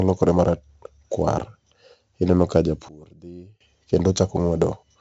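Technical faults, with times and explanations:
Throughout: 4-bit ADPCM compression. Each sample is coded as a coarse 4-bit step from a prediction. The resulting noise rides on the speech level, heard as heavy gritty hiss on loud parts and roughness on sharp onsets. Nothing is present above 7.8 kHz, which dulls the sound and fits a stream of about 64 kbps.
2.89 to 3.61 s: sudden gain jump. The level drops by about 24 dB at once, then returns just as abruptly. Speech and background noise fall together, with no fade. This is likely a digital gain change applied without a ramp.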